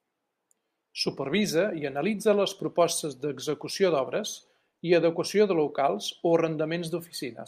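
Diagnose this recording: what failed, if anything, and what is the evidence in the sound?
Nothing in the recording points to a failure at any stage of the chain. The speech comes through without any event that would mark a fault.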